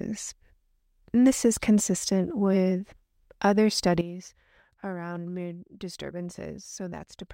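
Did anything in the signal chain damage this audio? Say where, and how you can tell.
Yes. At 4.01 s the speech and its background noise drop together by about 13 dB in a single step and stay down to the end. This is a sudden gain jump, likely a digital gain setting in the driver or processing stage applied without a ramp. Because it is instantaneous, it is not a fade or automatic gain control, which would glide.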